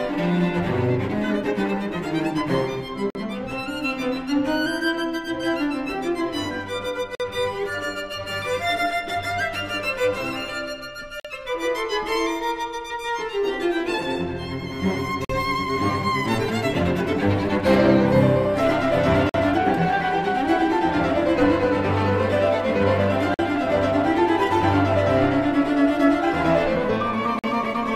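Gap between chunks at 3.10, 7.15, 11.20, 15.25, 19.29, 23.34 and 27.39 s: 48 ms silences every 4 s. Unlike dropouts, no sound is lost.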